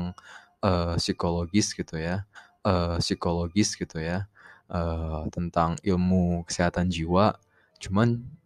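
At 2.35 s a stream segment is repeated: the player fetched or queued the same stretch of speech twice, so about 2.02 s of the programme plays again, running to 4.37 s. A small blip marks the jump back. On a spectrogram this shows as a block of harmonics and formant patterns copied identically side by side. At the seam, a thin vertical broadband line marks where the waveform breaks and restarts mid-cycle.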